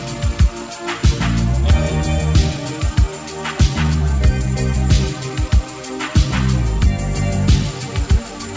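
Clock drift between sender and receiver runs throughout. The sender's clock is roughly 4 percent fast, so the receiver's jitter buffer keeps overfilling on this G.722 call path, which carries nothing above 8 kHz.

Repeated timing corrections span 0.14 to 8.48 s at 104 percent speed. The receiver keeps cutting short pieces to stay in step, heard as faint, unevenly spaced hiccups and a slightly unsteady tempo.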